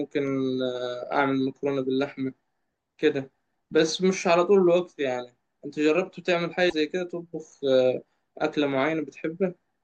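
From 6.69 to 6.73 s the speech garbles briefly, likely a broken MP3 bit reservoir after dropped 24 ms frames, showing as a smeared vertical spectrogram patch.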